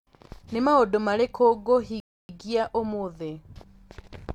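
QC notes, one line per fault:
2.00–2.29 s, rebuffering stall: right after "maũndũ marĩkũ" the speech cuts to silence for 0.29 s, then resumes exactly where it stopped. The player ran out of downloaded audio and paused until more arrived, so nothing is lost but 0.29 s is added.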